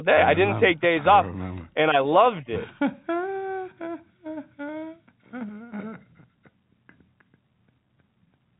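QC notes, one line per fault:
No faults found anywhere in the speech.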